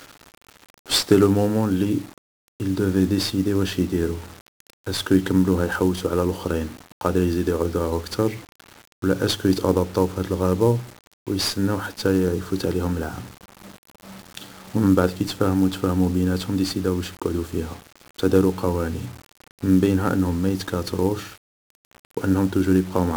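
From start to end, the speech carries heavy 1-bit DFPWM compression damage. Each sample keeps only one bit, nudging a tracking level up or down. The result is dense broadband quantisation noise. Everything sounds fuzzy and crackly, treble drowns in hiss, fitting a 48 kbps stream.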